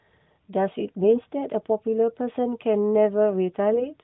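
A speech clip carried over narrowband AMR mobile coding, with a spectrogram empty above 4 kHz, shows AMR bit errors from 3.73 to 3.90 s. The sound turns hoarse and gargly, and the spectrogram shows smeared, scratchy harmonics across what fits about four damaged 20 ms frames.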